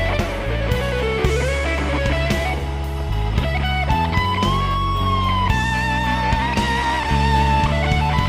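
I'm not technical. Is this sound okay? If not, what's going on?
No. From 6.42 to 7.00 seconds, the sound briefly plays about 5.5% faster and nearly a semitone higher, then snaps back. This is a drift correction step. Software keeping two clocks in step likely jumped the playback speed to balance its small store of audio.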